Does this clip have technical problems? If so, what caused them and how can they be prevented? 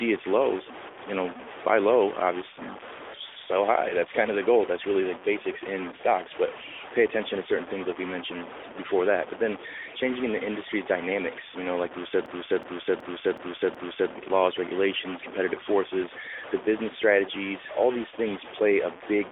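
Yes. A distortion runs through the whole speech clip, and the pauses fill with noise instead of silence. This is a stuck bit, likely one data bit held fixed by a broken line or converter. Repairing or replacing the faulty converter or wiring prevents it.

From 12.26 to 14.12 s, after "know like we said", one 0.37 s piece repeats five times, a stutter at about 2.7 Hz. This is a system hang loop. The system froze while the sound hardware kept replaying its ring buffer, which fits a 16384-sample buffer. Speech resumes at "with laws regulations competitive". Fixing the driver or system freeze prevents it.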